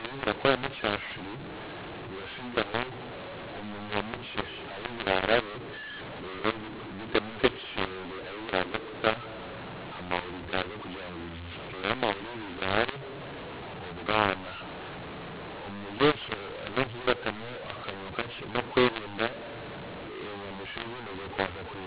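From start to finish the speech carries a mu-law and A-law mixup: the telephone audio was encoded with A-law but decoded as mu-law, so every sample's level is remapped onto the wrong logarithmic curve. Loud and soft parts swap scale unevenly, making the voice harsh and gritty, and pauses fill with hiss. On a waveform, silences sit visibly above zero. A spectrogram shows broadband noise smeared across gaps, with the band still stopping at 4 kHz, which fits 8 kHz telephone sampling.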